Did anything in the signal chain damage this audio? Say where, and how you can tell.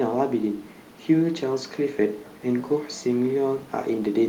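No, nothing in the signal chain damaged this speech.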